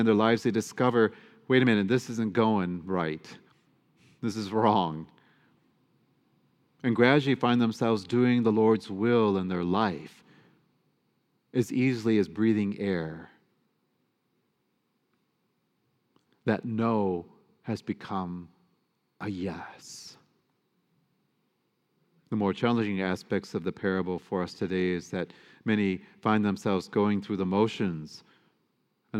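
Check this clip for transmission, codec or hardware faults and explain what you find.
I found no faults in the clip to explain.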